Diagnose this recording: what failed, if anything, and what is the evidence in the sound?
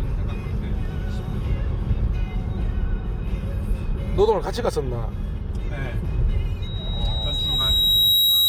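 A loudspeaker feedback squeal, an acoustic loop between playback and microphone, starts at 6.62 s and runs to the end at 8.49 s. A single 3.8 kHz tone swells over roughly a second and a half to about 5 dB above the audio, because loop gain there exceeds one.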